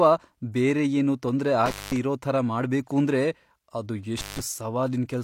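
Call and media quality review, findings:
Intermittent contact. Speech cuts at 1.66–1.96 s after "ಬೇರೆ ಏನೂ ತೊಂದ್ರೆ" and at 4.18–4.40 s after "ಇರೋ ಥರ ಮಾಡ್ಬೇಕೂಂದ್ರೆ ಅದು". Crackle at the edges. Loose cable or plug, open 211 ms and 159 ms.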